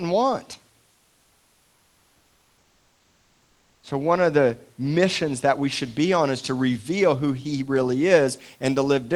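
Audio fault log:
0.91 to 3.83 s, comfort noise in place of the background: the sender likely stopped sending audio during the pause under Opus discontinuous transmission, and the receiver filled the gap with synthetic noise. For about 2.9 s the real room background, sitting about 43 dB below the loud speech, is replaced by a steady, featureless hiss about 2 dB quieter, which drops away when speech returns at "one of the missions".
5.73 to 9.16 s, pre-emphasis left on: after "the missions that we", the treble boost of the CD 50/15 µs curve is applied without the matching de-emphasis cut. High frequencies stand about 8 dB stronger at 10 kHz than at 1 kHz. The speech turns thin, bright and sibilant up to the call codec's 12 kHz band edge, and the lift stays through to the end of the clip.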